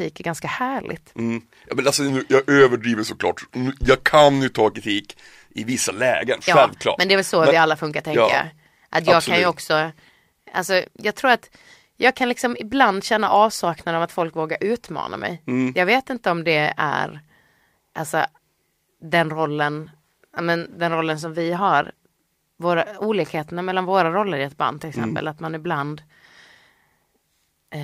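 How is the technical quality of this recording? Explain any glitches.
There's one real glitch. From 2.10 to 4.73 s the speech drops in pitch by about 1.5 semitones and slows to 0.919 speed. That's a wrong sample rate fault: audio played back slower than it was captured, which fits 48 kHz material running at 44.1 kHz unconverted.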